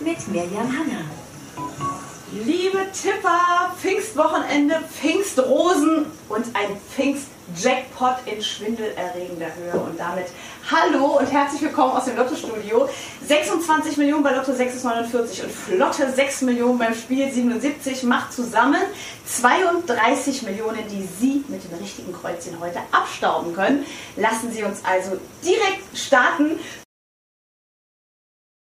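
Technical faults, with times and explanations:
19.98 s, block of digital silence: the sound drops to zero for 2.9 ms and returns without a fade. This fits a 128-sample buffer left unfilled, heard as a tick.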